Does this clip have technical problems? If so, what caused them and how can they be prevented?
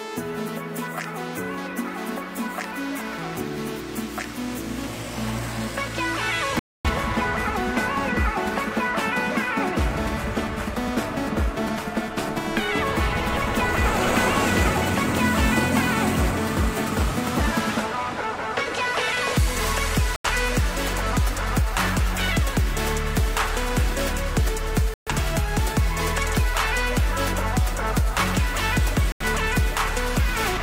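Yes. The audio cuts or quickly fades to silence four times: at 6.59 to 6.90 s, 20.16 to 20.29 s, 24.94 to 25.12 s and 29.12 to 29.25 s. These gaps of roughly 256, 85, 128 and 85 ms are a digital broadcast dropout. The receiver lost the signal or rejected corrupted frames and muted until clean data returned. The gap lengths fit whole frames of about 43 ms each, and nothing sent during them can be recovered. Improving reception with better antenna placement, a stronger multiplex or a wired feed prevents it.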